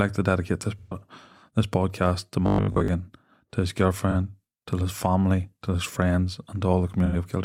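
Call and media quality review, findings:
AAC frame loss with concealment at 0.79–1.00 s, 4.11–4.14 s and 7.05–7.15 s. Smeared, noisy patches after "to dedicate this" and "to his". Decoder filling gaps of about 128, 43 and 85 ms from the last spectrum.

Robotic sound from repeated short buffers at 2.46–2.88 s, after "this podcast to". Metallic 50 Hz buzz. Likely a 20 ms block replayed, skipping most real audio.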